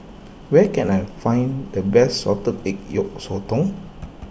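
No technical faults can be heard anywhere in the speech. There is nothing to place on a timeline.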